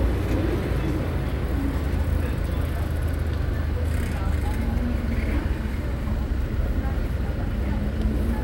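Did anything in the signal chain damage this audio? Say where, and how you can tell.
No, nothing in the signal chain audibly damaged this recording of sounds, and the signal stays continuous and intact at every stage a listener can judge.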